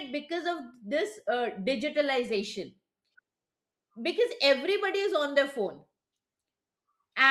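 A short recording of speech, with no technical faults to report. Nothing in it calls for a time or a cause.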